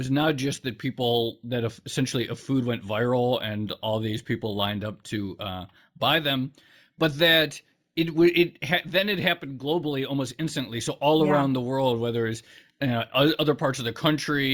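Throughout the speech, imaging from linear upsampling is present. The audio was raised in rate by straight-line interpolation, which fits a 16 kHz source brought to 48 kHz. The top end sounds dulled, and a faint mirrored copy between 8 kHz and 16 kHz, roughly 25 dB down, adds a metallic shimmer to sibilants.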